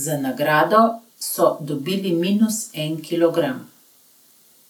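A short speech recording, and nothing is technically wrong with it.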